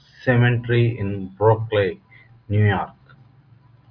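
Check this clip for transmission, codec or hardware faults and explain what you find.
Nothing stood out on listening to the speech.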